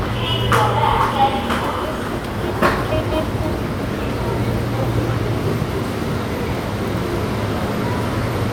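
An everyday sound recording with nothing technically wrong to be heard anywhere in it. No dropouts, distortion or other defects appear at any point.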